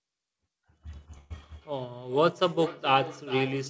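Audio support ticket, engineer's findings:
Burst of packet loss, 1.18–1.32 s: sound smears into a short held buzz/hiss that fades, then jumps ahead. About 120 ms concealed by the receiver extending the last audio; that stretch of the original is missing, with no hard silence.

Feedback echo between two devices, 1.55 s to end (about 3.7 s): each phrase returns roughly every 0.4 s, thinner and ringier on each pass, loudest about 14 dB below the direct signal. Second device in the room replays the call into a microphone; the echo canceller can't remove it.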